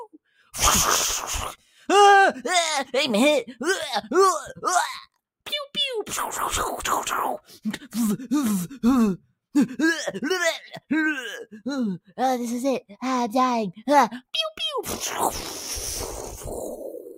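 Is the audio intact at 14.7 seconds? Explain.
Yes, the audio is intact at 14.7 seconds, with no audible fault at that moment.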